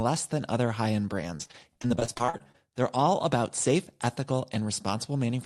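Between 1.37 and 2.56 s, the call's jitter buffer repeatedly went without packets, producing repeated packet loss (robotic sound). Each hole, the longest about 37 ms, was bridged by stretching the preceding sound, and about 342 ms of that 1.2-second span, roughly 29 percent, is concealment. The speech turns choppy, with brief pieces missing, while the Opus path around it keeps its 12 kHz upper limit.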